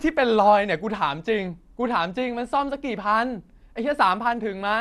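From start to finish the speech carries a dull, gurgling, granular texture, and nothing reaches above 12.2 kHz. This is likely MP2 compression at a low bitrate, around 80 kbps by the sound of it, where the upper sub-bands are switched off and the remaining ones coarsely quantised. On a spectrogram the top edge sits flat at 12.2 kHz, with blocky, flickering patches where bands drop in and out below it.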